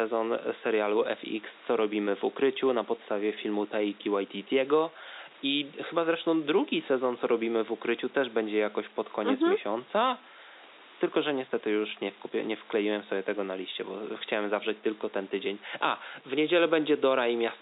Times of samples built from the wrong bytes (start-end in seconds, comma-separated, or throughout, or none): none